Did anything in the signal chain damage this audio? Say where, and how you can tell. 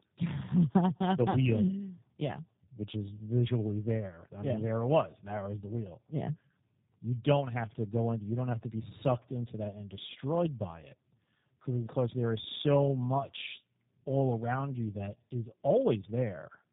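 Yes, at the codec stage, throughout: tandem speech coding. The speech is rougher, more muffled and more warbly than one low-rate coder would leave it, with nothing above 3.8 kHz, which points to G.729A twice with a G.711 hop between. Each re-encode compounds the last's errors; unlike packet loss, nothing drops out.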